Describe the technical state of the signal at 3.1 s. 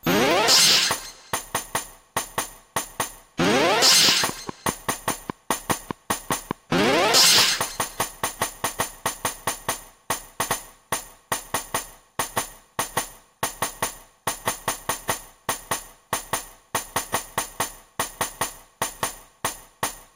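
At 3.1 s the signal is intact, with no dropout, distortion, glitch or other technical fault present at that moment.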